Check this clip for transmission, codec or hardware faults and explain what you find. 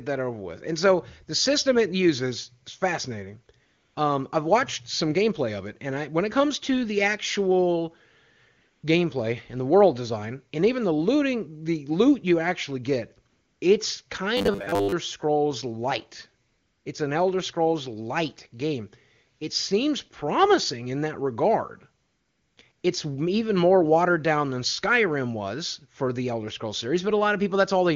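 Two kinds of fault are audible: repeated AMR comfort noise gaps during pauses, and one short stretch of robotic sound from repeated short buffers.

AMR comfort noise appears six times: 3.65 to 3.95 s, right after "it uses is fascinating"; 8.57 to 8.83 s; 13.29 to 13.61 s, after "loot you actually get"; 16.47 to 16.85 s; 22.03 to 22.57 s, after "promising in that regard"; and 22.71 to 22.83 s. In each gap the genuine room sound gives way to a smooth, even hiss that switches on and off abruptly. The sender judged these moments silent and stopped transmitting speech for 120 to 540 ms. The receiving end then generated synthetic noise from a rough level-and-spectrum sketch to fill the gaps.

The robotic sound runs from 14.37 to 14.92 s. The speech collapses into a stiff, metallic buzz at 100 Hz that follows the talker's rhythm only loosely. The likely cause is audio arriving too slowly, so playback looped a recent fragment instead of waiting. 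A 100 Hz buzz fits a 10 ms loop. Most of the sound in that half-second seems to be repeats, so the real audio underneath was largely skipped.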